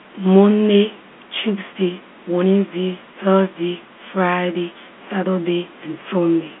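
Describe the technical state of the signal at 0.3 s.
At 0.3 s the signal is intact, with no fault at that moment, just the ordinary telephone-line sound of G.711 coding with its band topping out below about 3.8 kHz.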